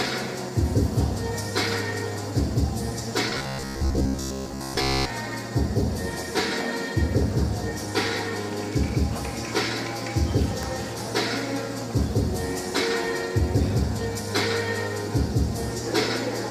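From 3.30 to 5.10 s the sound turns into a rigid, metallic buzz pitched at 66.8 Hz: robotic sound from repeated short buffers. The likely cause is audio arriving too seldom, so playback loops the last slice of about 15 ms, and for most of that stretch repeats stand in for skipped material. On a waveform, identical cycles recur every 15 ms. A spectrogram shows flat, evenly spaced harmonic lines at 66.8 Hz intervals.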